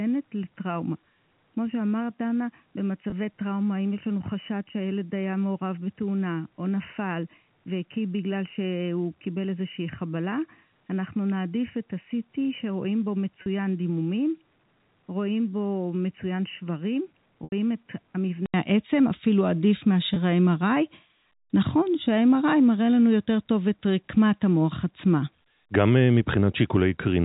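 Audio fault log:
0.00–18.54 s, input switched to a poorer device: The sound is dull and boxy, with nothing above 3 kHz, about 5 dB quieter, and carrying its own faint noise floor about 50 dB down. At 18.54 s an 80 ms gap is followed by fuller, brighter sound. This is likely a change of microphone or a headset call profile. A codec or filter would not bring a gap, a level step, and a change of background noise all at once.
3.10 s, 13.42–13.46 s, 17.44–17.52 s, 20.14 s, packet loss with pitch repetition: Gaps of 20, 40, 80 and 20 ms are bridged by repeating the last pitch cycle, which fades out. The shortest ones sound like a brief held buzz. The 80 ms gap at 17.44 s dies away before the sound returns. Each gap fits one or more 20 ms packets. Dropouts from a poor input would cut to silence, not leave this tonal hold.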